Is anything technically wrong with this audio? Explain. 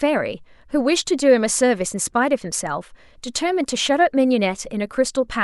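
No, nothing technical stands out here; it's a short stretch of speech that sounds just as it should.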